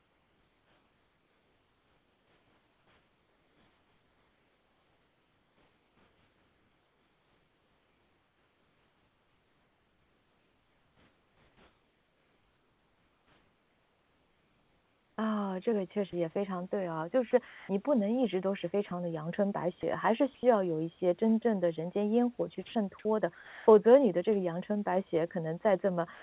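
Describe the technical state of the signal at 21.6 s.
At 21.6 s the speech comes through intact, with no fault present at that moment.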